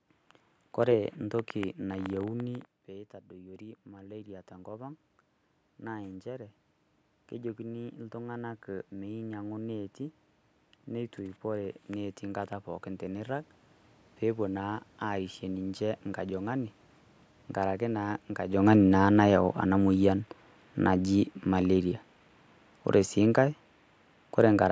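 At 2.45 s the speech drops by about 13 dB as the talker moves back. The automatic gain rises to compensate, climbing about 15 dB until 16.34 s. The voice and the room noise swell together slowly, and the background grows noticeably louder.

Around 18.5 s the talker comes closer and the level jumps. The automatic gain then falls by about 5 dB, settling at 21.91 s. The voice starts loud and sinks gradually, with the room noise dropping alongside it. The call's band limit at 8 kHz stays constant throughout.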